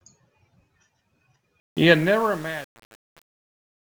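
From 1.6 s to the end of this speech clip, the fade-out shows truncation distortion. The fade itself starts around 1.6 seconds. But the gain stage keeps too few bits and adds no dither, which fits an 8-bit word. As the level sinks toward the smallest step, the waveform turns into coarse square steps. From 1.81 s onward it grows gritty.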